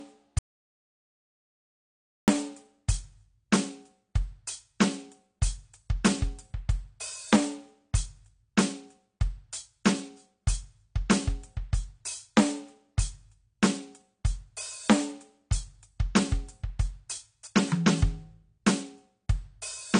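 From the start, the music carries AAC compression damage throughout. Nothing sounds above 9.8 kHz, so the top is dull. Sustained tones warble and fizz. This is plainly audible and points to a low bitrate near 32 kbps. The likely cause is an AAC-LC encoder starving the spectrum.

At 0.39 s the music cuts out completely. This is an audio dropout to silence. It lasts until 2.28 s, about 1.89 seconds of silence, with no room tone. The likely cause is lost input while recording continued. Whatever played in that gap is gone.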